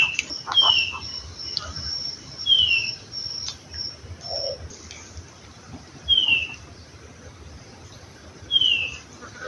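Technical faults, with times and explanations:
Nothing stood out on listening to this clip.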